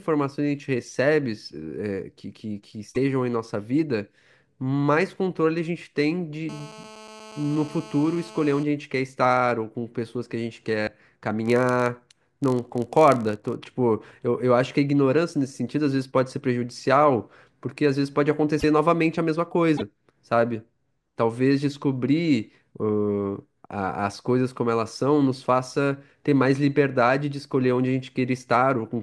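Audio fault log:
2.94–2.97 s, 10.86–10.89 s, 18.59–18.64 s, 19.77–19.82 s: broken MP3 bit reservoir. Brief glitches of one to two 24 ms frames, likely from cut frames pulling reservoir data from the wrong frame.
6.49–8.63 s: GSM phone buzz. A steady, raspy 217 Hz buzz rich in harmonics, about 20 dB below the speech, from rectified radio bursts during a call.
11.46–13.58 s: filter restarted on every block. A 46.9 Hz buzz tracking the speech level; each block starts with a transient from reset filter state, which fits 1024-sample blocks.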